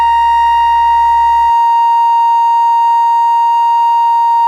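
Music, with periodic clock jitter from 0.0 to 1.5 s: interference wobbles the converter clock at around 1 kHz, adding sidebands that give a rough, metallic edge, harsher on higher content. Unlike random jitter's broadband hiss, it follows the music and vanishes in silence.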